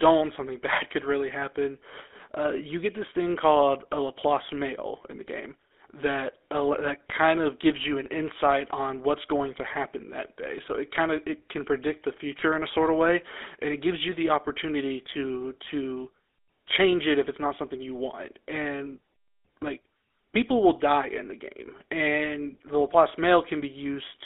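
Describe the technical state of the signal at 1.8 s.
GSM full-rate codec coding runs through the whole clip, 1.8 s included: regular-pulse excitation gives a buzzy, gravelly roughness. A spectrogram shows energy confined to about 300 Hz–3.6 kHz, with coarse, smeared harmonics, consistent with 13 kbps full-rate coding.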